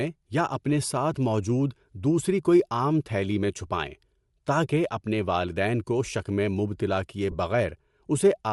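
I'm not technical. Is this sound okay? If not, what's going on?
No. The speech throughout has a grainy, breathy edge in its upper range, likely from Bluetooth LC3 compression squeezing the audio and filling the missing detail with noise. There are also lost LE Audio frames: at 1.14 s, just before "موجود دوسری کوئی عام", and from 7.31 to 7.35 s, just after "شک میں مبتلا کیے". Each gap is patched by repeating recent sound, which leaves a brief noisy smear.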